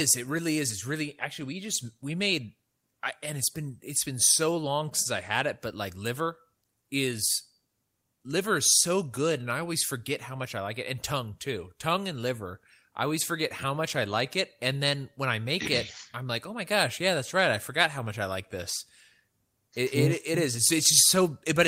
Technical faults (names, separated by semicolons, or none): short stall from a late packet